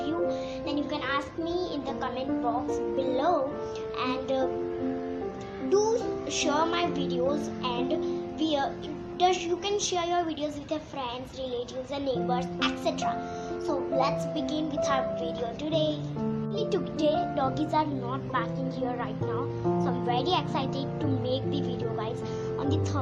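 No technical faults can be heard anywhere in the recording. There are no dropouts, glitches or other disturbances at any point.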